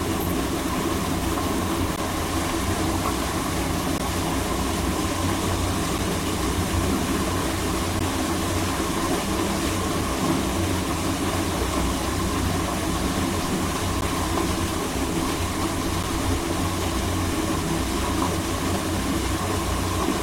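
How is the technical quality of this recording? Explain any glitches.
The recording has one recurring glitch, a gap between stream segments, heard as brief hard-edged dropouts at 1.96, 3.98, 5.98, 7.99, 14.01 and 16.03 s. Spaced about 2 s apart, they match segment boundaries whose timestamps leave a small gap that the player fills with silence, lasting about 7 to 16 ms. No audio is lost. On a waveform each is a flat silent slot, and on a spectrogram a thin vertical blank stripe.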